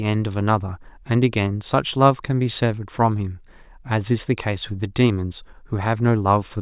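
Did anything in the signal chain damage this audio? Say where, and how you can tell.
No, nothing along the chain seems to have touched this speech; there's nothing to hear that points to damage at any stage.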